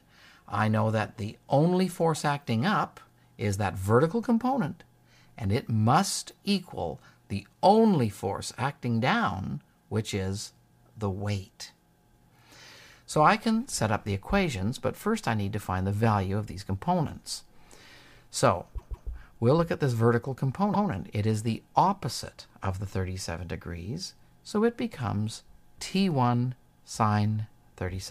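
Repeated frames: a 157 ms block of compressed frames was resent, so the decoder replays it, twice from 18.77 to 19.08 s and once from 20.73 to 20.89 s, causing audible stutters.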